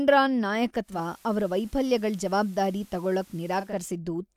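At 0.81 s the digital radio blends to analogue FM over about 225 ms: hiss rises, treble is cut, level drops about 1 dB; spectrogram shows a hard ceiling and noise floor until 3.80 s.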